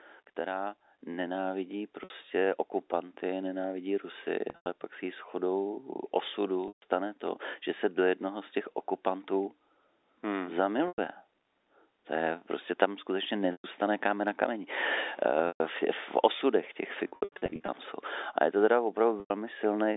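From 0.35 s to 14.74 s, automatic gain rising lifts the level about 9 dB, so speech and background swell together slowly. Packet loss with pitch repetition occurs at 2.04 s (60 ms), 4.50 s (140 ms over 160 ms), 6.68 s (140 ms), 10.88 s (100 ms), 13.52 s (120 ms), 15.48 s (120 ms, before "v v osudech těch"), 17.08 to 17.68 s (360 ms, after "v v osudech těch"), and 19.20 s (100 ms, after "je to teda"). The receiver repeats the last pitch period to fill each gap, which sounds like a buzzy held tone that fades toward silence before speech cross-fades back.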